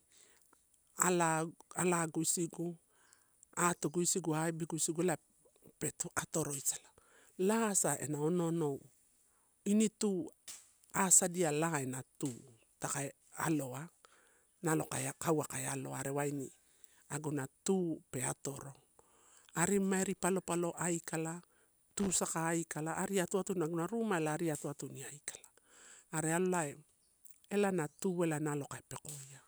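At 21.91 to 22.16 s, a loose connector crackle: an intermittent contact chops the signal into an irregular scratchy burst.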